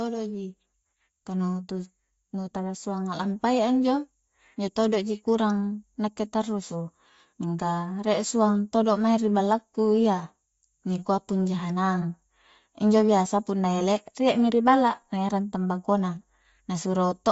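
Throughout, the speech stops at 7.7 kHz and carries a grainy, breathy edge. Noise-filled highs, unlike plain filtering, point to likely Bluetooth LC3 compression.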